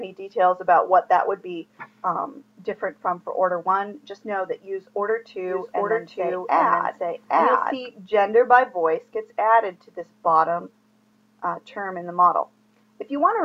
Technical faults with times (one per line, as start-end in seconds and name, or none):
5.48-7.74 doubled audio track